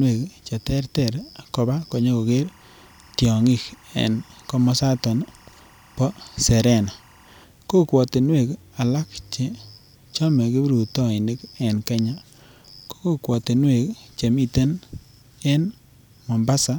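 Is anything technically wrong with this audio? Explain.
Yes. From 2.28 to 7.44 s there is timecode bleed: linear timecode from a neighbouring track or cable leaks into the speech path, its square wave flipping between roughly 1 and 2 kHz. It sits faintly behind the speech, some 35 dB down, as a steady chirping warble whose cadence fits 23.976 fps code.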